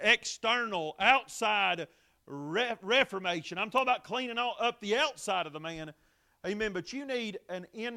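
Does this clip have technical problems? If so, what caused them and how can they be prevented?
Yes. At 3.78 s, between "reformation I'm" and "about cleaning all up", a sharp snap sits on top of the speech, peaking around -25 dBFS. It is an electrical switching spike, likely an arc from a nearby switch, motor or static discharge coupling into the audio line. On a waveform it appears as a narrow spike, and on a spectrogram as a thin vertical line spanning all frequencies. Shielded, balanced cabling routed away from switching gear, with suppression on noisy appliances, prevents this.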